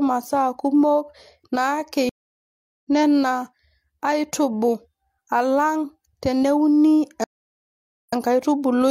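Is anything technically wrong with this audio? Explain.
Yes. Two stream reconnects break the speech. From 2.09 to 2.85 s the sound drops out for about 0.74 s and comes back roughly half a second further on. From 7.24 to 8.13 s, after "alang teneuni", there is 0.84 s of silence and playback resumes 46 ms earlier, repeating a sliver. The connection failed, the player reconnected and restarted its decoder mid-stream. Unlike a brief packet dropout, each gap is long silence followed by a jump in position.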